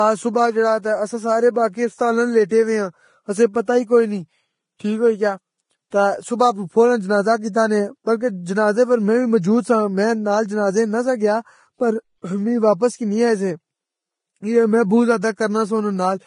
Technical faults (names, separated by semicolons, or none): Vorbis compression; pre-echo